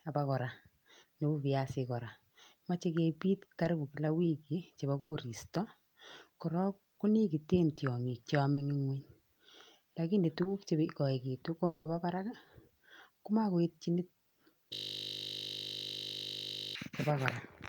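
At 3.63, 7.75, 8.53 and 10.43 s there is short concealed packet loss. Audio went missing for 20 ms each time (40 ms at 8.53 s), and the receiver papered over each gap by extending the preceding sound. Each is only a brief smear or wobble, too short to fade into a held tone.

At 4.99 s a burst of packet loss removes 120 ms. Concealment stretches the last sound and quickly turns it down, so most of the gap, about 110 ms, is near-silent before the speech resumes at 5.13 s with a piece missing. It is longer and emptier than the isolated smears.

From 11.65 to 11.87 s, 200 ms of speech is missing. It is replaced by a lengthening, decaying continuation of the last sound, ending in about 30 ms of silence. The likely cause is a long network dropout. What sets it apart from the burst is the longer held fade.

From 14.73 to 16.75 s a system hang loop repeats one 20 ms slice about a hundred times. 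The result is a steady 50 Hz buzz rather than a fade, because the same buffer was replayed exactly.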